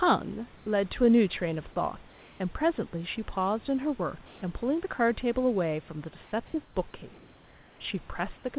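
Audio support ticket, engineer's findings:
Comfort noise in place of the background at 0.56–0.66, 2.08–2.40, 4.26–4.42, 6.24–6.32, 6.46–6.54, 6.64–6.76 s. Room tone in pauses turns into steady, featureless hiss, level shifting by about 3 dB down to 2 dB up. Likely sender-side discontinuous transmission: voice detector halts audio in gaps, receiver synthesises shaped noise. Band-limited to 4 kHz throughout, which fits a G.711 call path.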